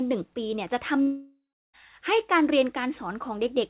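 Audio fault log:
1.02–1.75 s, long network dropout: the speech stops and the last sound is stretched into a buzzing, hissy tail that fades away, then about 0.35 s of silence or low steady noise follows before the speech returns with about 0.72 s gone. No audio likely arrived during this stretch, so the receiver filled the gap by extending what it last had until that ran out. Both sides of the gap lack everything above 4 kHz, which fits a narrowband call codec such as G.711.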